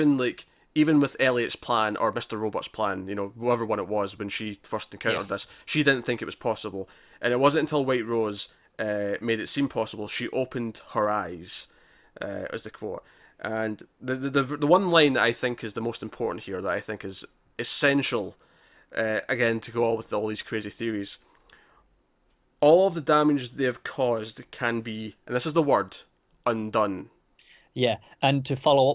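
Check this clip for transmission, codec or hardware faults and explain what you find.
No faults stand out anywhere in this speech recording.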